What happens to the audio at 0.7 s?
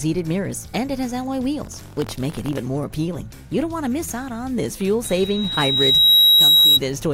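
Nothing goes wrong at 0.7 s, and the audio is intact at that moment.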